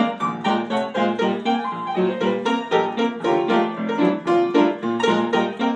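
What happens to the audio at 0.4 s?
Nothing goes wrong at 0.4 s; the audio plays through that moment intact, with no dropout, click or distortion.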